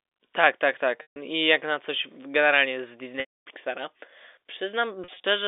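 Packet loss with pitch repetition occurs three times over the telephone-band G.711 line. At 1.02 to 1.16 s, just before "I jak na coś", 140 ms is missing. At 3.2 to 3.42 s, after "na coś generalnie z", 260 ms is missing. In both gaps the last pitch period is looped as a held, buzzy tone that fades within about 50 ms, so the longer gap ends in silence before a short cross-fade back. From 5.04 to 5.24 s, 100 ms is lost in runs no longer than 40 ms, heard as brief buzzy holds. This looping and fading sets the fault apart from a plain dropout, which cuts straight to silence, and from a stutter, which replays whole syllables.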